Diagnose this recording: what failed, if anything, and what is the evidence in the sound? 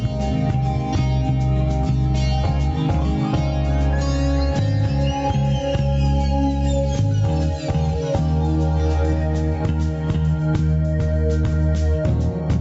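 Throughout the clip the gain swings by around 10 dB, so loud and soft passages sit unnaturally close in level and the whole thing sounds squashed. That is gain pumping, and the likely cause is input gain set far too high for the microphone, with a fast limiter or compressor clamping down on each peak and releasing in the quiet spaces. The absence of content above 8 kHz fits the call path's bandwidth.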